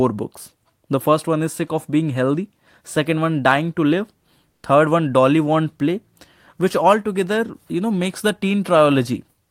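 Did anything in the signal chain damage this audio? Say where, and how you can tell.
Yes. Between 4.51 and 4.63 s, comfort noise replaces the background for 120 ms, about 7 dB quieter than the surrounding room sound, which sits about 48 dB below the loud passages. The likely cause is codec discontinuous transmission: the receiver synthesises smoothed noise during the pause. On a spectrogram, that patch looks flatter and more uniform. On the waveform, the noise floor dips.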